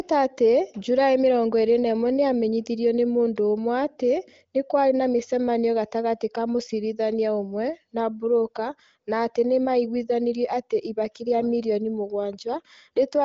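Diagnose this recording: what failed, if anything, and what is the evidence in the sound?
No failure detected here.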